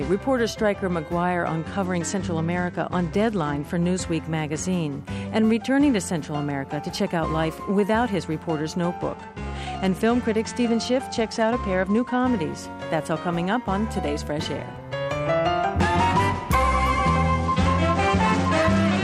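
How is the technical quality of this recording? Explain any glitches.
Quality is compromised by three Bluetooth SBC bit pool drops, at 1.85–3.75 s, 8.97–12.33 s and 17.46 s to the end. The link evidently congested, bits were cut, and treble dulled while gritty noise rose, consistent with a bit pool of 28 falling to 12, roughly 96 kbps.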